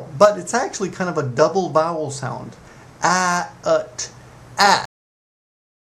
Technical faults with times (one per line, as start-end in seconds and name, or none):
4.85-5.86 cut-off end